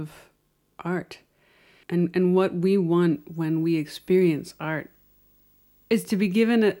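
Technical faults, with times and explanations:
3.14–6.8 s, video or display buzz: after "and and what we", a faint 50 Hz buzz with hash above it, plus a thin whine at 15.6 kHz, sits roughly 40 dB under the speech. A screen or video cable is leaking its field and line scanning into the audio.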